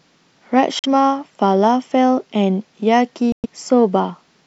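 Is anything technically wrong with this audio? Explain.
Yes. The speech cuts out twice: from 0.79 to 0.86 s, a gap of about 46 ms, and from 3.32 to 3.46 s, about 116 ms. Each time the sound drops to silence and then resumes further along, as though it kept playing through the hole. This is likely a Bluetooth dropout. Audio packets arrived at the headphones too late and were discarded, so output stopped until valid data returned. The gap lengths fit the loss of roughly two and five packets.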